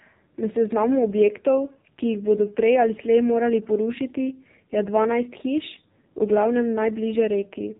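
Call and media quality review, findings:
AMR narrowband mobile codec, throughout. Speech band-limited, nothing above 3.8 kHz; thin, muffled sibilants. Heavy buzzy, synthetic texture from the vocal-tract model rebuilding each 20 ms frame from a few pulses per 5 ms subframe. The damage level points to a low AMR-NB mode, consistent with about 5.9 kbps. Probable component: narrowband mobile leg of the call path.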